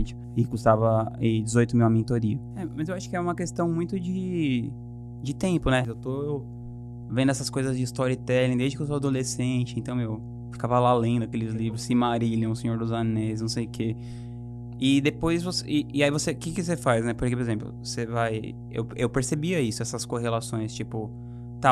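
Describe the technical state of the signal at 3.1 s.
At 3.1 s the speech carries mains hum. It is not a passing event; the hum runs through the whole clip. It sits at 60 Hz. A ground loop or a nearby transformer is letting the power line leak into the signal path. You hear it as a steady, low buzz under the speech. It is fairly loud, only moderately below the speech itself. Low harmonics of 60 Hz thicken the tone.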